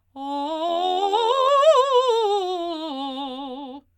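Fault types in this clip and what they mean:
overlap-add ripple, 0.69 to 1.50 s: the music has been split into short windowed frames and rejoined with an overlap whose windows do not add up to a steady gain, so the level dips and recovers once per frame. Here that pumping is about 6 dB deep and repeats around a hundred times a second, which turns into a metallic buzz with extra tones around each note, laid over the music for that stretch.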